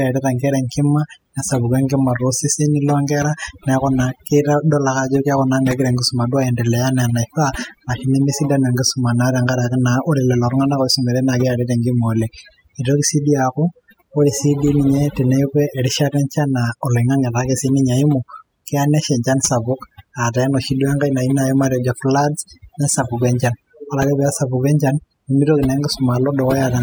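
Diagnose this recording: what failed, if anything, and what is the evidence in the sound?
Overdone noise removal at the processing stage, running the whole way through. Gating bands near the noise floor leaves near-silent gaps with twinkling specks, and quiet parts of the speech go with them.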